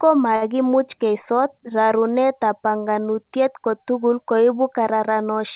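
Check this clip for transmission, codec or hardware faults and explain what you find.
One transmission fault stands out, heard over narrowband call audio that stops at 4 kHz, which fits a G.711-style telephone codec. At 0.36 to 0.43 s, just before "keisot rarunetab banganutiet kotugul", a late packet left the jitter buffer empty: a short stall from a late packet. The receiver filled about 54 ms by prolonging the preceding sound, then resumed with nothing lost. That sound is held unnaturally long with a faint buzzy dip, and everything after runs 54 ms later.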